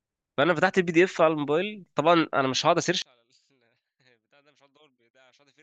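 From 3.02 s the speech drops about 37 dB in mono to a faint trace, waveform near-flat, spectrogram nearly blank, likely from one channel inverted.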